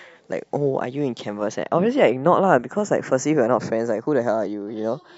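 Two channels of speech recorded by devices running on separate clocks, mismatched by something like 50 parts per million, produce channels drifting apart throughout. The delay between left and right creeps steadily, reaching only a fraction of a millisecond by the end. When the pair is summed to mono, that sliding offset drags a set of comb-filter notches slowly across the spectrum, so the voice takes on a gradually shifting flange.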